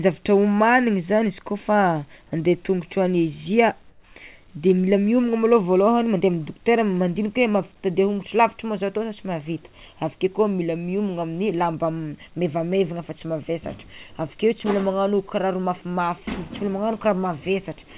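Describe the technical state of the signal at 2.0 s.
At 2.0 s the speech is intact, with no dropout, click or distortion, only the band limit at 4 kHz that points to a G.711-style narrowband call codec.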